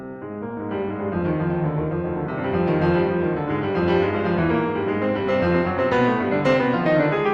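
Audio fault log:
No faults heard.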